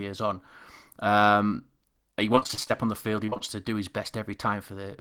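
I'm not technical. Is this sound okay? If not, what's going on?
No. Twice the speech turns choppy and robotic for a moment: from 2.35 to 2.72 s, just before "on the field", and from 3.26 to 3.42 s, just before "to do his". This is repeated packet loss. Small pieces of the audio went missing in quick succession, each only a few hundredths of a second. Every hole was covered by stretching the last bit of sound, so about half of each stretch is patched-in filler, which gives the robotic, broken-up effect.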